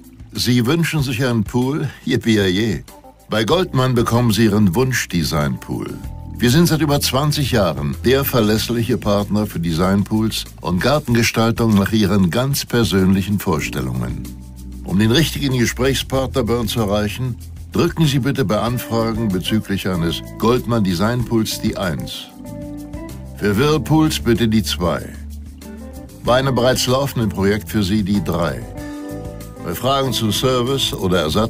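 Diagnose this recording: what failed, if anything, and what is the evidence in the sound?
Nothing stood out on listening, and there is no failure in the sound to diagnose at any stage of the chain.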